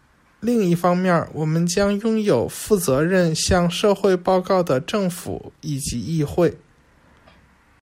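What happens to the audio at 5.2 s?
Nothing goes wrong at 5.2 s; the speech there plays through intact, with no dropout, click or other fault.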